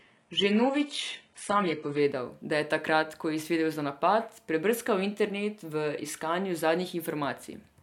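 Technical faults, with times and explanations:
0.0 to 2.0 s, adaptive stream starting at a low bitrate: the speech opens thin and smeared, with nothing above about 11.1 kHz and a hissy, synthetic-sounding treble. At 2.0 s, just before "da je takrat ko", the quality jumps up abruptly with no gap. The player began on a very low rung, which fits a spectral-band-replication codec at around 12 kbit/s. Once it had measured the connection, it switched to a fuller, higher-bitrate stream, plausibly near 96 kbit/s.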